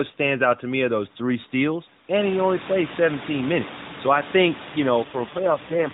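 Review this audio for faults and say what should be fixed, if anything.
Right after "I think you", at 5.04 s, there's an AMR rate drop that runs to the end at 5.94 s. The bandwidth stays put and nothing cuts out, but the speech turns buzzier and more synthetic. That texture fits the network pushing the mobile codec down from 12.2 kbps to something like 4.75 kbps, giving the vocal-tract model far fewer pulse bits. The room noise comes up around 2 s, sitting about 14 dB under the speech. To prevent it, capture over a stronger radio link or a wideband or IP path so the codec isn't forced down to its lowest modes.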